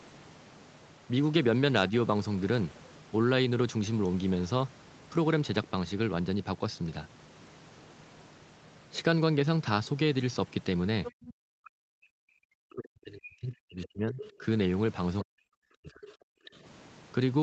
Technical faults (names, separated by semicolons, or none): other side's voice leaking through; background gated by the echo canceller; speech suppressed in double talk